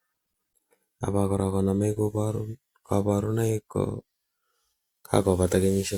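A speech recording with no audible technical faults.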